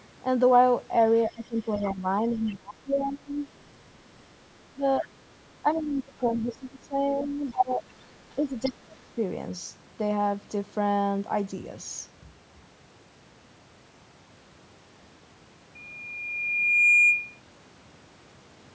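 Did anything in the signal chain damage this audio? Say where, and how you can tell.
Yes. Speech is suppressed in double talk from 1.29 to 3.41 s and from 4.73 to 9.18 s. The waveform shows the speech envelope dipping, by up to about 25 dB in the first span and about 20 dB in the second. The likely cause is the call's echo canceller ducking the near talker while the far side also spoke.

The other side's voice leaks through at the same call-processing stage. It appears at 1.76 to 2.56 s, 5.75 to 5.83 s, and 7.48 to 8.72 s, about 25 dB below the speech, then about 15 dB below in the last stretch. A spectrogram shows faint, separate harmonic traces under the main voice. The likely cause is residual loudspeaker echo that the canceller failed to subtract.

A loudspeaker feedback squeal runs from 15.75 to 17.40 s. A single 2.4 kHz tone swells over about a second to roughly 10 dB above the signal. 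It shows as one bright horizontal line on the spectrogram and a growing sinusoid on the waveform. The acoustic loop gain exceeded unity at that frequency.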